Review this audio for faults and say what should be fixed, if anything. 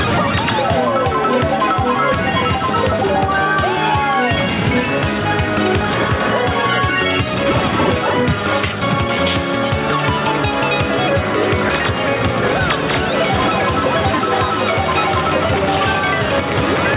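The level pumps all the way through, rocking by around 5 dB. This is gain pumping, likely from input gain set far too high, so a fast limiter or compressor keeps clamping down and squashing loud and soft parts together. The band ending near 4 kHz fits a G.711 narrowband call path. To prevent it, lower the microphone gain so the limiter rarely engages.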